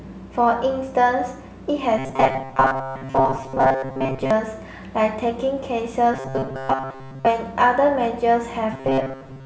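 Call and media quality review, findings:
Rigid metallic buzz at a fixed 133 Hz at 1.99–4.31 s, 6.14–7.26 s and 8.73–9.45 s: robotic sound, likely from repeated short buffers of about 7.5 ms, with most of the real audio skipped.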